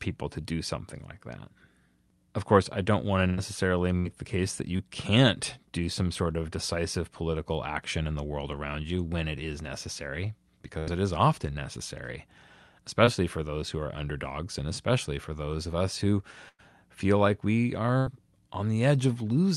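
The first burst of packet loss runs from 3.27 to 3.39 s, and others follow at 3.99–4.07, 10.79–10.89, 16.49–16.61 and 17.99–18.08 s. Each time a run of packets arrived too late or not at all, and between 60 and 100 ms of speech is gone. The receiver carried the last sound forward and faded it, so each gap is heard as a held buzz or a fading hiss before the speech picks up again further on.

A short concealed packet loss occurs at 4.77–4.81 s and again at 13.05–13.09 s. Each time only about 20 ms failed to reach the decoder, and the filled stretch blends straight back into the real audio. The result is a brief smear or wobble, and a consonant may drop out. These are told apart from the bursts by length: no sustained buzz or audible fade builds up.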